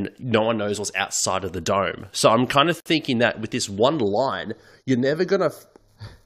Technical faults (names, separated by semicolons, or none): gap at a join of encoded pieces; channel delay (comb filtering)